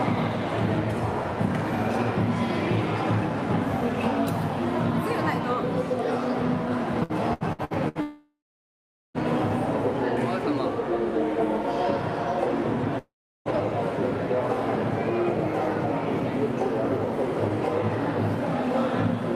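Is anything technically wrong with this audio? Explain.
Yes. From 7.03 to 7.98 s there is repeated packet loss, heard as robotic sound: five short gaps, the longest 70 ms, each patched by repeating the previous sound. That makes it choppy rather than silent. At 8.01 to 9.17 s and 12.98 to 13.48 s, the sound is stretched into a fading buzz or hiss and then falls to silence for about 0.8 s and 0.4 s, which is most likely a long network dropout. Unlike the packet loss, each is one continuous gap.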